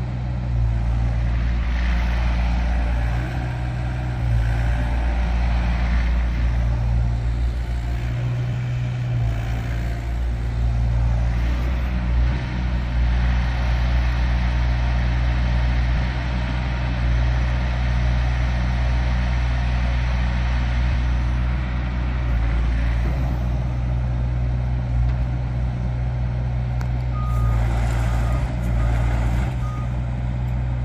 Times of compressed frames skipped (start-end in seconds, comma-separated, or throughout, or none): 8.52, 15.95, 20.92